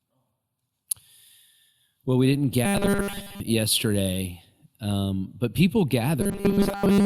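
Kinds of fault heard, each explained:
Robotic sound from repeated short buffers: from 2.65 to 3.40 s and from 6.21 s to the end, the speech becomes a rigid metallic buzz at 200 Hz, likely from new audio arriving too slowly so a 5 ms stretch keeps repeating over most of the real signal.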